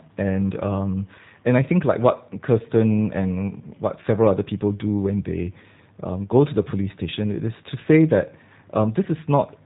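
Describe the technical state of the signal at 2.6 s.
At 2.6 s the speech carries G.729 codec damage, present across the whole clip: the low-rate coder, which fits 8 kbit/s, rebuilds each 10 ms frame from a vocal-tract filter and sparse pulses. Nothing above 4 kHz survives, and a rough, synthetic buzz sets it apart from a clean band-limit.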